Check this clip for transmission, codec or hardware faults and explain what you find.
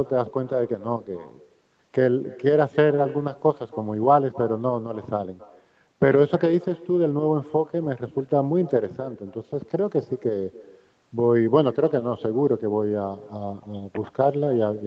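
One fault: echo with no canceller, throughout the clip. The far end's loudspeaker feeds its microphone unremoved, so every phrase returns roughly a third of a second later, about 21 dB down and thin.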